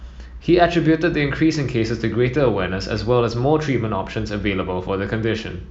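At 2.37 to 2.39 s the speech is interrupted by a corrupt frame decoded: one compressed frame arrived with flipped bits, and the decoder played it anyway, so misread codes and gains put energy in the wrong frequency regions for roughly the span of that single frame. It sounds like a short squeaky blip. On a spectrogram it shows as a brief vertical smear of misplaced energy, and the waveform shows a small burst peaking around -25 dBFS.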